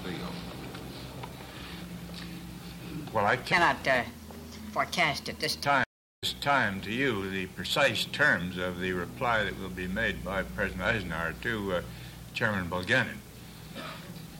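Section at the wrong speed, 3.52 to 5.65 s: the audio runs 1.26 times too fast, so pitch rises about four semitones along with the tempo, sounding high and hurried. The likely cause is this stretch being played or edited against the wrong clock.

Stream reconnect, 5.84 to 6.64 s: the connection drops and the sound goes silent for 384 ms. A fresh decoder then picks up the stream 418 ms earlier than where it stopped, so a short stretch of already-heard audio repeats after the gap.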